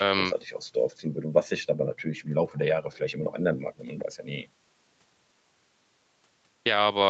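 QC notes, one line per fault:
No faults found; the speech has passed through normal call microphone processing, whose high-pass filter trims the lowest bass, and the audio carries nothing above 8 kHz.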